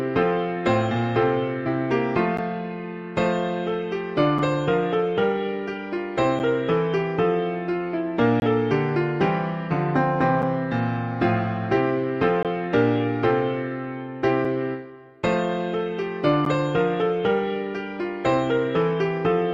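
Short holes of hard-edged silence cut into the sound at 2.37, 4.39, 6.39, 8.40 to 8.42, 10.42, 12.43, 14.45 and 16.45 s, each lasting between about 4 and 22 ms and arriving every two seconds. This is a gap between stream segments. The audio is delivered in 2-second pieces whose time stamps don't quite meet, and the player fills each shortfall with silence. Nothing is lost, and each hole adds between about 4 and 22 ms to the playback.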